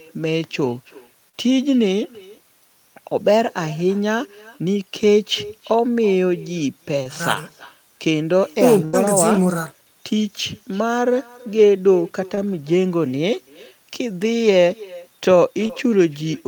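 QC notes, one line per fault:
Throughout: echo with no canceller. The far end's loudspeaker leaks into its microphone, returning a copy about 22 dB down, roughly a third of a second late, visible as faint delayed repeats on the spectrogram.
1.29–1.35 s, 7.03–7.07 s, 12.35–12.39 s, 15.67–15.71 s: short concealed packet loss. Brief gaps of 20–40 ms were filled by extending the previous sound, heard as quick smears.
8.85–8.95 s: burst of packet loss. About 80 ms went missing. The concealment holds the last sound and fades it, so the waveform envelope decays before the audio resumes with that stretch skipped.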